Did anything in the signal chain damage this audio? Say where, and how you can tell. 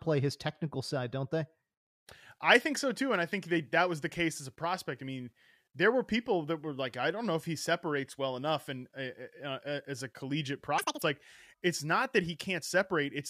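Yes. From 10.78 to 11.02 s the speech briefly jumps to double speed and an octave up, a sign of audio read two samples at a time in the sample-format conversion stage. The reader treats each pair of samples as one frame, as if the stream were stereo or twice as wide, so it plays at 2.0x. On a spectrogram the harmonics and formants jump to twice their spacing. The waveform's periods appear squeezed to half length.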